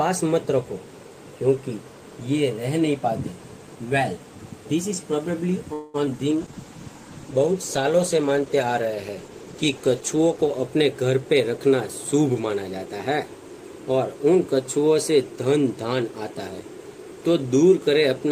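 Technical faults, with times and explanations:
5.73 to 5.96 s, call audio freeze: The sound stalls here, and its last moment is drawn out as a fading buzz or hiss for about 0.2 s. It never drops to silence. Then the audio resumes from where it stopped, and nothing seems lost. The likely cause is packets held up in transit until the jitter buffer ran dry. The receiver stretched the last sound to bridge the wait. That inserts a gap and adds about 205 ms of delay.
6.06 to 6.09 s, short concealed packet loss: A brief smear sits in the sound here. About 20 ms of audio never reached the decoder in time. The receiver patched the hole by extending the preceding sound, copying its pitch if it was voiced or shaping noise if not. It then cross-faded back into the real audio. Only about 6 ms of the gap is guessed material, so it reads as a quick wobble.
6.32 to 10.72 s, call bitrate drop: The sound turns coarser and duller across this span. 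The call's bandwidth estimate fell, and the encoder was cut from 32 kbps to 14 kbps. It stayed at that low rate for about 4.3 s. With fewer bits, Opus quantises more roughly and trims the upper frequencies. That gives a watery, muffled quality. Clarity returns only once the bitrate climbs back.
11.22 to 13.32 s, jitter buffer speed-up: The sound runs hurried here, at about 110% speed, with its pitch unchanged. The jitter buffer was holding more audio than its target, as happens when delayed packets land together. To shrink that backlog, the receiver cut out many short pieces, each one or a few pitch periods long. In total it removed about a fifth of a second. The pace rushes while the pitch holds steady.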